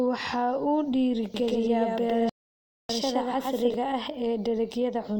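After "waxa uu", from 1.34 s to 3.74 s, a doubled audio track appears. A second, full-band copy of the speech trails the original by roughly a tenth of a second at about the same level, likely because a slower capture path mixed the audio in twice. It adds no reverb, and it starts and stops abruptly.

From 2.29 s to 2.89 s a rebuffering stall occurs. The player ran out of buffered data and halted, so the sound drops to silence for 0.6 s and then resumes exactly where it stopped. Nothing is lost, but 0.6 s is added to the timeline.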